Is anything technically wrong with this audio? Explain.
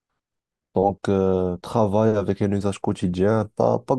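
No, there is nothing technically wrong with this speech recording.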